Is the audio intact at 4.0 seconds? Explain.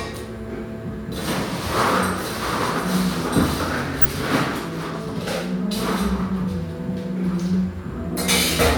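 No. From 4.01 to 4.06 s a corrupt frame decoded: flipped bits in one compressed frame misled the decoder's gains and codes, throwing energy onto wrong frequencies. It is heard as a brief glitch, showing as a thin vertical smear on a spectrogram.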